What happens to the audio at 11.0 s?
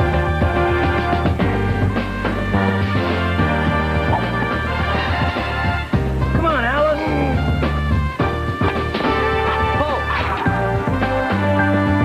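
Nothing goes wrong at 11.0 s; the audio there plays through intact, with no dropout, click or distortion.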